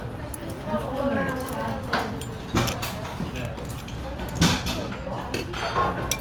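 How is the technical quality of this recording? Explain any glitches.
The recording has a clock-sync problem that runs the whole way through, so the timing never sits quite still.

Clock drift between sender and receiver is behind it. The sending side's clock runs roughly 4 percent fast, so audio arrives a bit quicker than the receiver plays it out. The jitter buffer keeps filling, and the receiver has to keep trimming material to stop it overflowing. You won't hear a single clean glitch from this. Instead the sound has a faintly restless, not-quite-steady feel all the way through.

The repeated timing corrections are those trims, running from about 0.25 s to 6.16 s. To keep up with the sender, the receiver keeps dropping short slices of audio, and the net effect is playback at about 104 percent speed. All the cuts go the same way but land at uneven spacing, so you get small hiccups and a slightly lurching tempo rather than smooth continuity.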